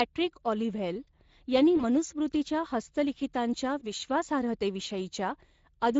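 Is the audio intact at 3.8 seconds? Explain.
No. VoIP packet loss concealed by the speech codec hits from 3.79 to 3.92 s. About 20 ms of audio went missing, and the Speex decoder filled it by extending its last pitch and filter with falling gain. That leaves a brief, fading smear, and because each frame builds on the previous one, the sound stays weakened until about 3.92 s.

Underneath, the Speex codec damage present throughout is plainly audible at this moment too. It fits a mid-rate setting of about 16.8 kbps, where the thin excitation coding leaves the speech sounding hoarse and noisy.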